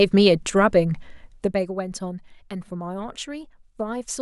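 From 1.20 s to 1.73 s the speech carries zipper noise. A level drop of roughly 10 dB is applied in unsmoothed steps, around 200 per second, so each step adds a tiny click. Together they form a buzzy ticking that rides on the speech while the level falls.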